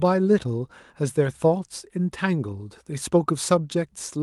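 Nothing stood out on listening to this speech recording, which carries the band-limited character of an Opus call link with content reaching up to about 12 kHz.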